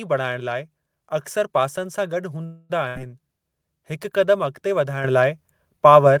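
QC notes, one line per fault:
2.45–2.72 s, call audio freeze: the sound stalls and the last moment is stretched into a fading buzz or hiss for about 240 ms. It then carries on from exactly where it stopped, with nothing lost. Likely delayed packets emptying the jitter buffer, leaving the call about 243 ms further behind.
2.88–2.98 s, burst of packet loss: a short held buzz or hiss fades down for about 78 ms, and then the audio jumps ahead, so roughly 80 ms of the sound is simply gone. A run of packets got dropped or arrived too late, and the receiver papered over the hole.
5.04 s and 6.06 s, microphone volume stepped up: voice and background jump louder together in a single step, about 8 dB at the first point and about 3 dB at the second. The call software judged the mic too quiet and bumped the input level.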